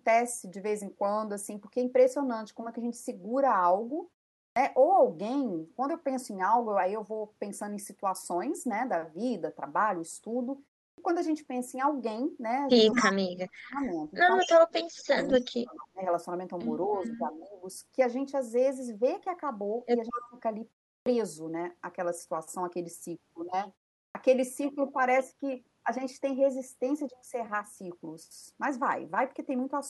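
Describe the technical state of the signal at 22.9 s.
At 22.9 s the speech signal is intact, with no dropout, distortion or other fault at that point.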